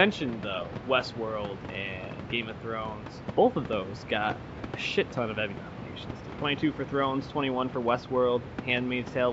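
No technical faults can be heard in this speech recording.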